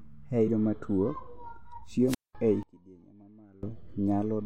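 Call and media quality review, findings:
Damaged data in a compressed stream, 0.47–0.49 s: short chirp/blip where the decoder loses frame sync and skips ahead to the next valid header. Spectrogram: brief broadband smear; waveform: abrupt discontinuity with a jump in content.

Wireless microphone squelch dropout, 2.07–2.35 s: hiss rises as the FM link fades, then the receiver squelch mutes output for about 203 ms before the speech returns. Waveform: near-flat gap; spectrogram: noise band, then blank column.

Speech level drops by about 24 dB between 2.63 and 3.63 s, leaving a faint residue. Likely one channel inverted, with the centred content cancelling in the mono sum. Waveform: sharply reduced envelope; spectrogram: low end and speech harmonics largely missing.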